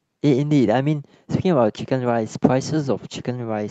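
There are no technical faults to describe at any point in the speech, which comes through a WebRTC call path working as intended.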